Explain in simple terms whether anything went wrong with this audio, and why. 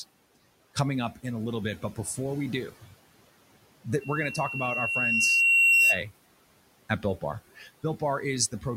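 A microphone picked up its own loudspeaker, causing loudspeaker feedback squeal: from 4.00 to 6.02 s a thin 2.7 kHz whistle swells over about two seconds, then stops.

The noise suppressor mistook some speech for background noise, so speech was cut by the noise suppressor: between 7.57 and 7.84 s, about a tenth of a second of speech turns faint and swallowed.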